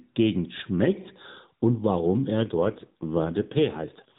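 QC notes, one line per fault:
2.38–4.19 s, AMR rate drop: right after "schmeckt und warum" the speech turns rougher, buzzier and more synthetic until the end of the clip, with no gap and no change to the narrow mobile-phone band, still cut off at 4 kHz. The codec has switched to a lower rate, leaving fewer bits per 20 ms frame to model the voice. The coarser texture fits a step from 12.2 down to about 5.9 kbps.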